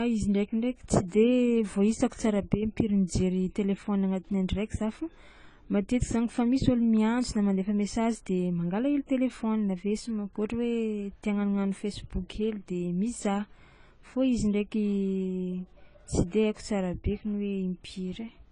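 From start to finish the speech sounds dull and smeared, with nothing above 10 kHz and a warbly, fizzy edge on sibilants. That's likely AAC compression, AAC-LC starved of bits, consistent with roughly 24 kbps, so the encoder drops the top band and thins out the rest.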